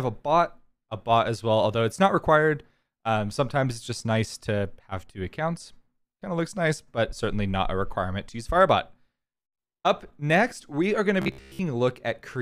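From 11.22 to 11.59 s the sound turns robotic. A rigid, metallic buzz near 66.7 Hz appears. This is likely robotic sound from repeated short buffers. A 15 ms chunk keeps replaying while most of the real audio is skipped.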